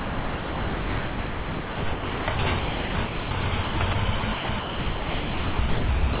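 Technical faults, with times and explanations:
Throughout, sound chopped by the voice detector: 4.5 s becomes steady hiss, likely gated comfort noise; flat, low waveform blocks and a featureless spectrogram below 4 kHz.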